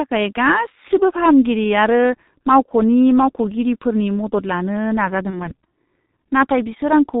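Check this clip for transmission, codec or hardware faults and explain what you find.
Two faults are present: codec damage across the whole clip and one packet-loss gap late on.

G.723.1 codec, throughout: heavy damage from 30 ms frames; nothing above 4 kHz and a slow-updating voice model leave speech muffled, hoarse, and consonant-blurred. This is steady coding texture, unlike a low-pass filter. It fits the 6.3 kbit/s mode.

VoIP packet loss concealed by the speech codec, 5.30–5.52 s, after "मावख'नि मावख'गिरिफोरनि मदद लानो": a single lost 30 ms frame was extrapolated, giving a fading buzzy tone or coloured noise. Distortion lingers about 0.2 s, unlike a clean dropout.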